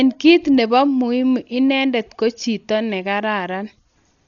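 From start to finish the speech sounds dull and boxed-in, with nothing above about 7 kHz and a rough, fluttery noise hanging around the voiced parts. That's likely Dolby Digital compression at a very low bitrate, something near 40 kbps, with empty frequency lines filled by dither noise.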